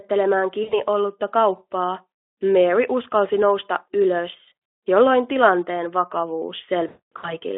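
VoIP packet loss concealed by the speech codec occurs at 0.64 to 0.81 s, at 4.49 to 4.52 s, and at 6.87 to 7.39 s. Each time, the decoder fills the gaps by stretching its last pitch and filter state with falling gain, producing a buzzy tone or coloured noise that fades. The first two events each drop about 80 ms, which fits four 20 ms frames. The last drops about 320 ms spread over 360 ms, including a 240 ms run, so the voice is hollowed out longest there. The Speex coding itself adds only light damage within the narrow 300 Hz to 3.4 kHz band.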